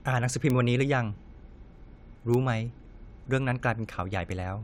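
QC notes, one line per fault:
0.50 s and 2.34 s: bit error spike, a flipped bit throwing one sample (then two) far off and straight back, giving broadband ticks of about -10 and -16 dBFS.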